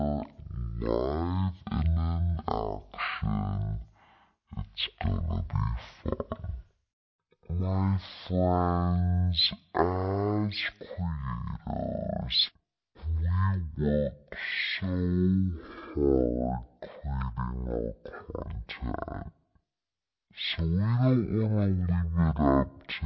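Wrong sample rate throughout: the speech plays at about 0.36 times normal speed and roughly 17.6 semitones lower, which fits 44.1 kHz audio played back at 16 kHz.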